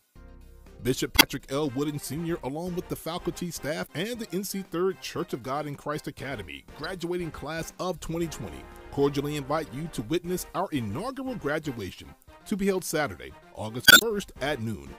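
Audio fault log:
1.14–1.23 s, 3.83–3.87 s, 6.84–6.86 s, 9.66 s and 13.83–14.04 s, damaged data in a compressed stream: corrupt frames cause the decoder to lose sync and emit brief squawks or blips. The last adds about 48 ms. On a spectrogram they appear as broadband vertical smears, and on the waveform as abrupt discontinuities.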